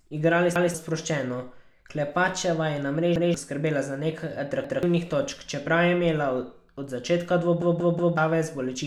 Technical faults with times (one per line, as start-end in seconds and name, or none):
0.56-0.74 repeated buffer
3.16-3.34 repeated buffer
4.64-4.83 repeated buffer
7.62-8.17 repeated buffer